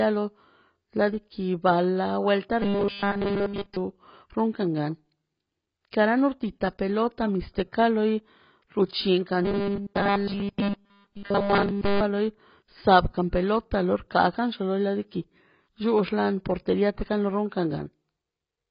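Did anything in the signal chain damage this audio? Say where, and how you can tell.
Yes, two stages. Throughout the 18-second clip, the speech sounds dull and smeared, with nothing above about 5.1 kHz and a fizzy, warbling edge on sibilants. That's AAC compression at the codec stage, likely AAC-LC pushed hard, at a rate that fits something around 16 kbps. The encoder is starving the spectrum, lowering the cut-off and leaving holes or noise-filled bands where detail should be.

The second is a robotic sound from repeated short buffers, in the driver or buffer stage. From 2.62 to 3.77 s and again from 9.45 to 12.01 s, the speech collapses into a rigid, metallic buzz at 200 Hz that still loosely tracks the syllables. That pitch means a 5 ms chunk is being replayed over and over, likely because fresh audio wasn't arriving in time. Essentially all of each stretch is repeats rather than real signal.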